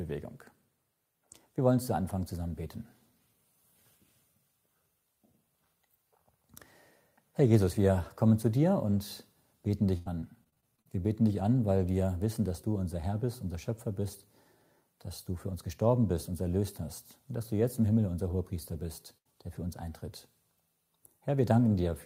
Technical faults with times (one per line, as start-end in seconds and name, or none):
9.67-10.87 repeated packet loss (robotic sound)
18.67-18.75 lost packet rebuilt from error correction
19.17-19.27 burst of packet loss
19.55 lost packet rebuilt from error correction